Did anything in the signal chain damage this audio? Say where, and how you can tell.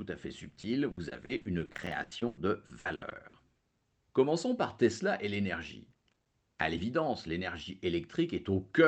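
Yes. Repeated packet loss on the network leg of the call, from 0.49 to 3.35 s, makes the speech choppy and robotic. Holes up to 100 ms are bridged by stretching the last sound, covering about 28% of that span. This is concealment smearing sound forward, not dropouts to silence.

Processor overload crackle in the driver or buffer stage, at 1.71 to 1.95 s and 5.91 to 6.26 s, is heard as gritty tearing. Many very short silent gaps with hard edges point to missed buffer deadlines of about 3 ms each. These gaps are far finer and denser than the packet-loss holes.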